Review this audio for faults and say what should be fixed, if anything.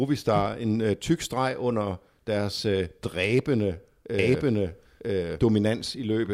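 A doubled audio track starts abruptly at 4.19 s, right after "under deres øh dræbende", and runs to the end of the clip. A full-band second copy of the speech trails the original by about a second, at roughly the same level, with no decay or room colour. The copy is likely a second capture of the same signal through a slower path, or an edit layering two misaligned copies. Route each source through a single capture path and check edits for overlapping duplicate regions.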